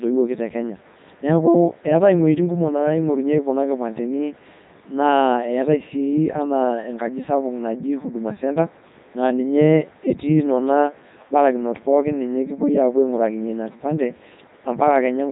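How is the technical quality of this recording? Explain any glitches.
Poor. Throughout, the speech sounds robotic and buzzy with nothing above 3.8 kHz, the mark of the Codec 2 vocoder, consistent with its 3.2 kbit/s mode, rebuilding the voice from sine waves instead of keeping the waveform.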